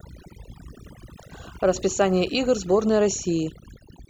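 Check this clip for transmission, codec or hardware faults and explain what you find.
Overdone noise removal runs through the whole clip: over-aggressive noise reduction switches off frequency bands near its noise estimate, leaving twinkling specks over near-silent pauses, unlike codec warble, which sits throughout.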